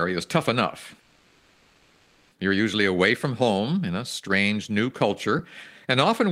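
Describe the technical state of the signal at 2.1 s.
At 2.1 s the signal is inside a call audio freeze running from 1.00 to 2.32 s. The receiver's jitter buffer ran dry, most likely because packets were held up in transit, and it filled the 1.31 s wait by extending the last sound as a fading buzz or hiss rather than silence. When the audio resumes nothing is lost, but everything after arrives 1.31 s late. On a spectrogram this shows as a smeared, stationary band decaying in level. The waveform shows a repetitive, shrinking envelope.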